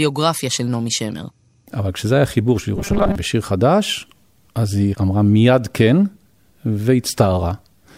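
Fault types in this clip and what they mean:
Robotic sound from repeated short buffers: from 2.76 to 3.15 s the speech turns into a rigid, metallic buzz locked at 200 Hz. That's likely playback looping a 5 ms slice whenever fresh audio arrived late, with roughly half the real signal skipped.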